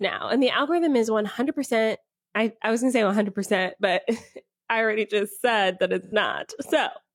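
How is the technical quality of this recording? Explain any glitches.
There's one glitch in this speech recording. From 6.02 to 6.13 s there's AAC frame loss with concealment: about 85 ms, consistent with two dropped frames, patched from the previous spectrum, so it comes out as a brief smeared, noisy blur.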